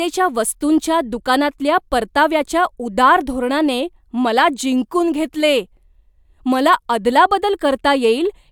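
No technical faults are audible anywhere in the speech.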